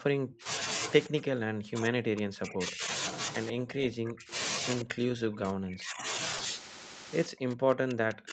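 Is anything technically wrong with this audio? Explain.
Yes. This speech has three kinds of technical fault.

Speech suppressed in double talk occurs five times: 0.0 to 0.46 s, 1.08 to 2.9 s, 3.52 to 4.32 s, 4.84 to 6.05 s, and 7.27 s to the end. The level falls by about 40 dB at worst (about 35 dB in the third stretch), and the speech dips or breaks into pieces. This is likely an echo canceller that could not separate the near talker from loudspeaker echo while both sides spoke, so it attenuated everything. A waveform shows the envelope collapsing in those spans, and a spectrogram shows the energy thinning to near-silence.

Echo leak appears as brief scraps at 0.29–0.33 s, 3.47–3.51 s and 4.81–4.85 s. Each is a faint copy of the voice delayed by 128 ms, at about −25, −20 and −15 dB relative to the speech, so the last is the most noticeable. The likely cause is a loudspeaker-side canceller that left residual microphone pickup, which was sent back. 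On a spectrogram these look like weak repeats of earlier harmonic patterns, 40 ms long and offset by 128 ms.

Short concealed packet loss occurs at 6.37–6.41 s. A 20 ms piece never arrived, and the decoder filled the gap by extending the preceding sound before blending back into the real signal. It is heard as a tiny smear or wobble. On a spectrogram it shows as a short patch where the harmonics hold unnaturally steady, or as a stretch of noise-like texture, and the waveform may show a subtle discontinuity at the seams.

Nothing is present above 8 kHz, which fits the band limit of the Opus call path and is not a fault.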